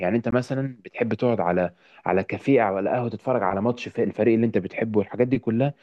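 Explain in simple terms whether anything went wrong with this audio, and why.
Right at 0.31 s there's a tiny hole in the speech, roughly 18 milliseconds long, and then the sound picks up exactly where it left off. That's a gap at a join of encoded pieces: two separately encoded chunks were stuck together without trimming the encoder's built-in padding, so the padding stays in as a small silence.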